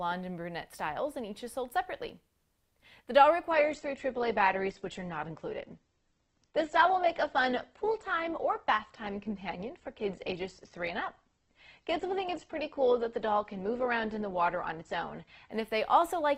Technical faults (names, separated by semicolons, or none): adaptive stream at a lower bitrate